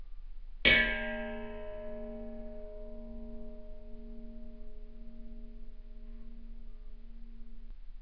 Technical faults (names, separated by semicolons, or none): none